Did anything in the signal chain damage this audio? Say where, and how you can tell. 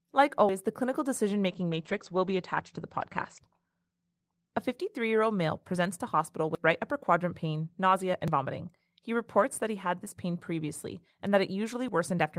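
Yes. At 0.49 s, just before "the clinical decision", and again at 6.55 s, 8.28 s (right after "quadrant pain nausea and") and 11.88 s, the sound jumps forward with no gap. This likely points to a dropped buffer (overrun) at the driver or buffer stage, losing a few tens of milliseconds each time. A network dropout would leave silence instead.

From 1.49 s, after "the clinical decision", to 4.99 s, before "year old male presents", a call bitrate drop in the codec turns the audio rough and muffled. The rate falls from 32 to 14 kbps and bandwidth narrows from 20 kHz to 8 kHz, bottoming out for about 1.9 s. A fixed low-pass filter would not recover like this.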